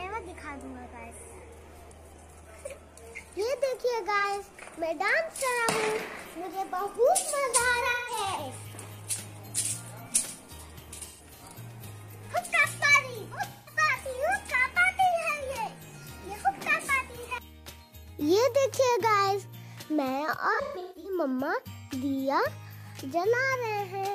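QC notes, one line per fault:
4.19–4.25 s, 7.90–8.18 s, 11.04–11.43 s, 13.49–13.77 s, 20.53–21.19 s: AAC frame loss with concealment. Lost frames (about 43, 171, 213, 171 and 384 ms; the third and last scattered, their longest runs roughly 150 ms) were rebuilt from the previous good spectrum, leaving smeared, noisy or phasey patches.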